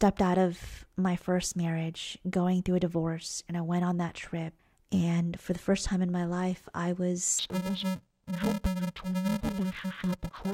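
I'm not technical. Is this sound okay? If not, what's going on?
No. From about 7.39 s to the end of the speech, the audio turns dull and robotic, with a steady buzz underneath. This is interleaved audio read as planar: the left and right samples arrive alternating in small blocks, but the playback side reads each block's first half as left and second half as right. The blocks here are very short, about 2.7 ms each, so instead of dropping an octave the sound picks up a buzz at 375 Hz, the rate the blocks repeat.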